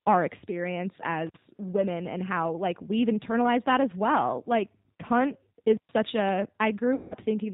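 Throughout, the speech carries G.729 codec damage: plainly rough, synthetic texture from 8 kbit/s model-based coding, with nothing above 4 kHz surviving. At 1.27 to 1.37 s an intermittent contact opens the line for about 53 ms, dropping the sound with crackle at both edges. From 6.95 to 7.15 s, VoIP packet loss concealed by the speech codec replaces 160 ms, which fits eight lost 20 ms packets, with an extrapolated buzzy tone or coloured noise that fades, and the speech stays weak or distorted as recovery begins.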